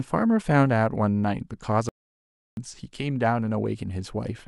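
At 1.89 s the speech drops out to silence, with no room tone at all, until 2.57 s, so about 0.68 s is simply gone. That's an audio dropout to silence, likely from the input briefly disconnecting or muting while the recorder kept writing silence.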